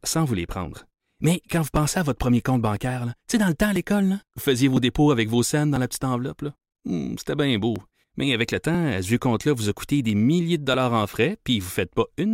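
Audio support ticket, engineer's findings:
Periodic USB or driver dropouts in the speech, starting right after "quand vous" at 1.76 s and repeating every 1.0 s through 11.74 s. Regular ticks, roughly 2 ms of audio skipped each time. Something's blocking the bus or driver on a timer.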